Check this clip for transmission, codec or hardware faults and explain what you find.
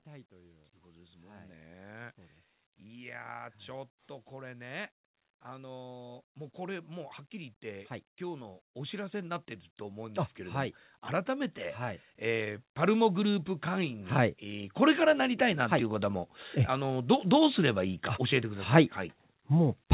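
One fault: automatic gain rising, running from 0.05 s to 16.34 s. The gain control judged the input too quiet and kept lifting its gain, by about 26 dB overall, so voice and background noise swell together across most of the clip instead of holding a steady level. The band stops at 4 kHz, which fits a G.711 mu-law call path at 64 kbps.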